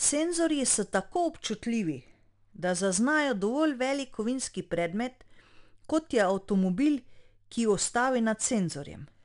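From start to finish the speech carries 4-bit ADPCM compression, and the damage is plainly audible. Each sample is coded as a coarse 4-bit step from a predicted value, so a gritty hiss rides on every loud syllable and swells and fades with the level, with roughness on sharp onsets. A spectrogram shows that noise smeared broadband beneath the voiced energy and nothing above 10.6 kHz, which points to a bitrate near 89 kbps.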